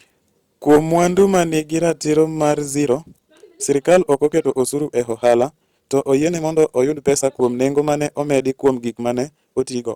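Speech, with hard clipping throughout: peaks driven about 7 dB past the clipping point are cut flat on a small fraction of samples, adding crackly high harmonics. From 2.68 s to the end the pace jumps to about 1.47 times normal at unchanged pitch, sounding rushed, likely a time-stretched section.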